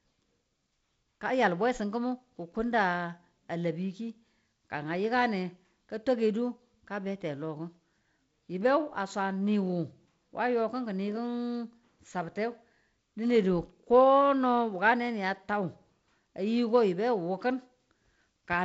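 No technical faults turn up in this speech clip; it carries G.722 wideband telephone coding, with the band ending near 7.7 kHz and a faint hiss plus slightly grainier low-band detail that fits the codec's 48 kbit/s mode.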